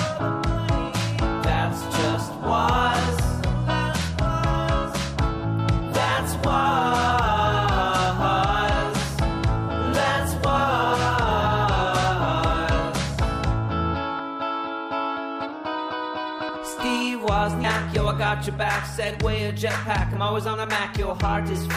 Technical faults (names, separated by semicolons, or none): compressed frames skipped